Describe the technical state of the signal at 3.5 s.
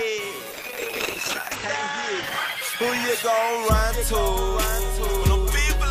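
At 3.5 s the signal sits inside a call bitrate drop spanning 0.54 to 4.13 s. The encoder's rate falls from 64 to 8 kbps, forcing coarser coding and a band limit near 8 kHz instead of 20 kHz, so the sound is muffled and rough.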